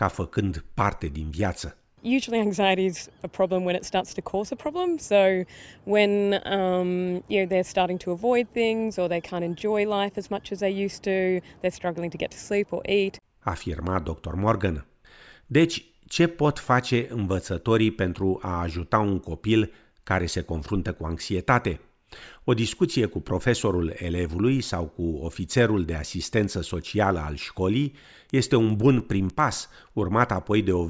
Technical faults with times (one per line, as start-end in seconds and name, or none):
28.30-30.10 resampler restarted on every block